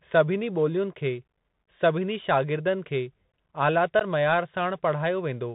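Bluetooth CVSD headset codec throughout: the speech squeezes through 64 kbps one-bit delta modulation, cutting everything above 4 kHz, roughening sibilants and leaving a plainly audible granular hiss.

Unconcealed Bluetooth headset packet loss at 1.59 s and 3.99 s: gaps of 7.5 ms and 15 ms, fitting roughly one and two dropped packets, leave abrupt holes before the speech resumes briefly quieter.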